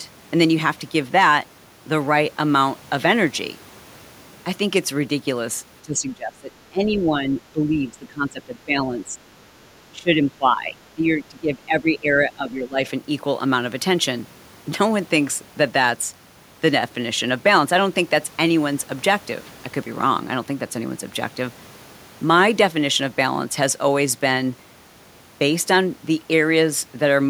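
Between 5.82 and 12.8 s the speech dips four times: 5.82–6.52 s (about 25 dB down), 6.69–9.18 s (about 15 dB), 9.91–10.77 s (about 20 dB) and 10.95–12.8 s (about 15 dB). The likely cause is speech suppressed in double talk, where an echo canceller could not separate the near talker from overlapping far-end echo and attenuated the near talker too. On a waveform the envelope sags into notches; a spectrogram shows the same stretches fading, darkest around 6 s.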